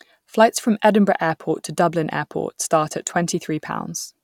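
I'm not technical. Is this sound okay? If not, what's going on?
Yes, nothing in this recording points to a technical problem with how the sound was captured or delivered.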